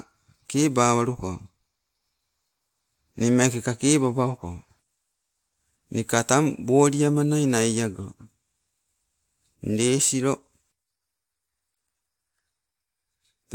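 No technical faults are audible.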